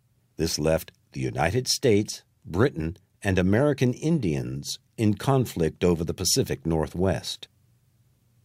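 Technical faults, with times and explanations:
Nothing stood out as a technical problem on listening to this recording.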